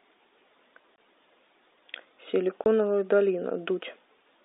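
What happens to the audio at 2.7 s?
One speech packet was lost just before that point, from 2.64 to 2.66 s, and the receiver played silence in its place: packet loss filled with silence. That cuts a 20 ms hole into the telephone-band speech, with abrupt edges.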